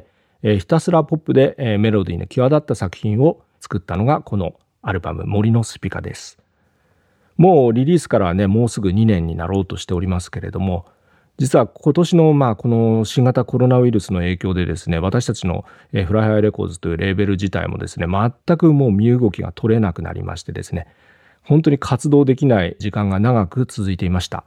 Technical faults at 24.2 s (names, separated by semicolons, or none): none